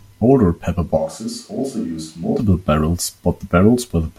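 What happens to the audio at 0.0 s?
Nothing goes wrong at 0.0 s; the audio is intact at that moment.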